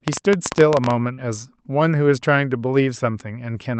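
A train of clicks runs from 0.08 to 0.92 s over this speech recording: roughly fifteen similar pops at about 14.5 per second, unevenly spaced and standing well above the speech, likely from electrical interference or a faulty connection. Short concealed packet loss follows at 1.13 to 1.19 s, where 40 ms of audio never arrived and the receiver extended the preceding sound, leaving a brief smear. The call path's upper frequency limit, near 8 kHz, points to a wideband call codec.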